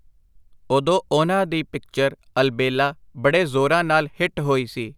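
No technical faults can be heard anywhere in this speech.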